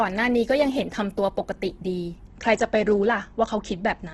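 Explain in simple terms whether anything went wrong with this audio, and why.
Throughout the speech, from start to finish, the sound is grainy and rough, with a noisy, sandpapery texture on the vowels where clean tones should be. Nothing is heard above 12.1 kHz, so the top end is trimmed. This is likely Opus compression, squeezed hard. When the encoder runs short of data, it keeps the overall loudness of each frequency band but fills in the missing detail with borrowed or noise-like content, which produces this hiss-textured roughness.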